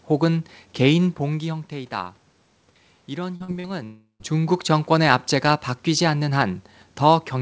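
A speech recording carried over a call path, band-limited so a spectrogram shows nothing above 8 kHz. Short concealed packet loss hits at 3.36–3.43 s, 3.44–3.51 s and 3.60–3.67 s. Each time about 40 ms of audio went missing and the receiver stretched the preceding sound to cover it. These are heard as brief smears or wobbles, and appear as short smooth patches where the harmonics flatten out. From 3.84 to 4.23 s there is a long network dropout, likely caused by a stretch where no packets arrived. The last sound continues as a fading buzz or hiss, followed by about 120 ms of silence. On a waveform this looks like a decaying envelope that ends in a flat gap before the speech resumes.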